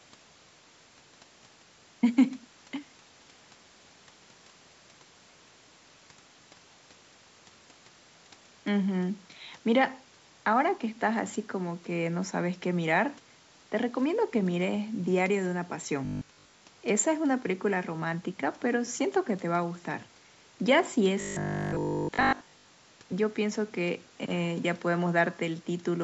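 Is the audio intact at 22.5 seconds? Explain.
No, 22.5 s falls in a stretch of robotic sound from 21.21 to 22.69 s, likely from repeated 20 ms buffers, leaving a rigid, metallic 50 Hz buzz.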